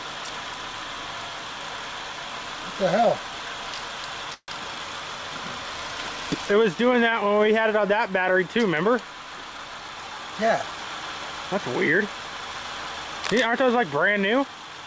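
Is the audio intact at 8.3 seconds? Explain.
Yes, the audio is intact at 8.3 seconds, carrying only the band limit near 8 kHz that the call path imposes throughout, consistent with a G.722 codec at 64 kbps.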